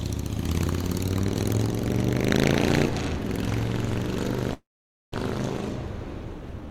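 At 4.53 s the sound trails off into silence until 5.14 s, a call audio freeze, likely from delayed packets; the resumed audio loses nothing.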